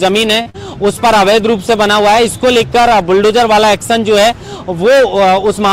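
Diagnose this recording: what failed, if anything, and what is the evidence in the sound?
A held stretch of sound with a slight buzz or dip from 0.41 to 0.48 s is a short stall from a late packet at the network stage. The jitter buffer ran dry, so the receiver extended the last sound for about 43 ms, then resumed where it stopped, adding 43 ms of delay.

Right after, from 0.50 to 0.56 s, a brief smear or wobble marks short concealed packet loss. About 40 ms of audio never reached the decoder, and the receiver papered over the gap with 43 ms of synthesized continuation before blending back into real audio.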